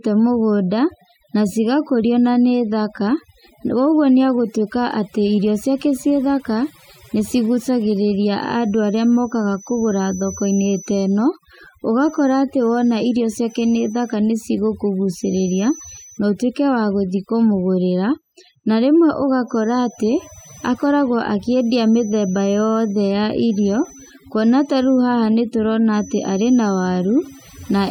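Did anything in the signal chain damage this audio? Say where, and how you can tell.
Yes. Overdone noise removal runs through the whole clip, and it belongs to call processing. The background collapses into near silence dotted with twinkling specks. A noise reducer set too strong is cutting individual frequency bands whenever they come close to its noise estimate, so quiet speech detail goes with them. Codec damage would track bitrate and smear transients instead of hollowing out only the low-level parts.

A feedback whistle comes in at 5.58 s and lasts to the end. It is a thin, steady 6 kHz tone sitting roughly 25 dB below the speech, swelling and fading slowly in level. The likely cause is an acoustic loop from loudspeaker back to microphone, in the analogue or playback path, held just under the point of runaway. Mains hum or an electrical tone would sit low with harmonics and keep a fixed level, and this one does neither.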